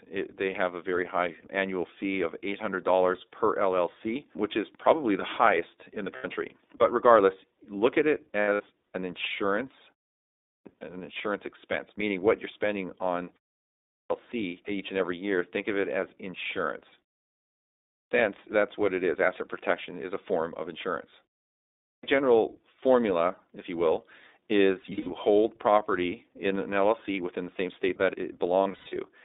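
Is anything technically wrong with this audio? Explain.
Yes, there are three faults.

The whole clip passes through the iLBC codec at 15.2 kbps in 20 ms frames. The speech sounds rough and synthetic. On a spectrogram, energy stops sharply at 3.7 kHz and below 250 Hz.

Lost iLBC frames occur at 6.16–6.26 s (80 ms), 8.40–8.61 s, 24.82–25.11 s and 28.64–28.97 s. The decoder repeats a buzzy pitch cycle to fill each gap, which shows as smeared, flattened harmonics.

There is a clipped start after a pause at 10.19, 13.65, 17.63 and 21.53 s. Each time, about half a second is swallowed while the output wakes, so "an insurance expense meaning", "each and every year" and "that's what it is" begin abruptly. The waveform jumps from flat silence straight to full level.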